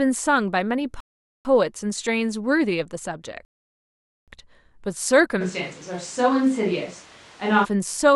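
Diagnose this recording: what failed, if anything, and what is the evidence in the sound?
Two rebuffering stalls occur at the playback stage, from 1.00 to 1.45 s and from 3.45 to 4.28 s. The speech cuts to silence and resumes exactly where it stopped, with nothing missing. The player exhausted its buffer and waited for data, adding 446 ms and 827 ms.

From 5.42 to 7.63 s the speech abruptly turns roomy and hollow, with thinner bass. Room noise rises to roughly 25 dB below the speech, but the level stays about the same. It snaps back just as suddenly. The likely cause is a switch to a distant microphone after the close microphone's feed dropped out at capture.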